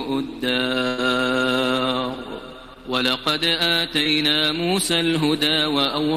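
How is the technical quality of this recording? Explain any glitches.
The recording has three dropouts from packet loss: one longer burst and two brief concealed gaps.

The burst of packet loss runs from 0.87 to 1.00 s. About 100 ms of audio never arrived in time, so the receiver stretched the last sound it had and let it fade through the hole, filling roughly 103 ms. That comes across as a held, dimming buzz or hiss. When the audio picks up again, the stretch in between is gone.

Short concealed packet loss occurs at 2.74–2.78 s and again at 4.04–4.07 s, each losing about 20 ms. In both places the decoder extrapolated from the preceding sound, pitched or noise-like as appropriate, for roughly 17–18 ms, then crossfaded back into the real signal. Each is heard as a quick smear or wobble, and any very short sound falling in the gap may simply drop out.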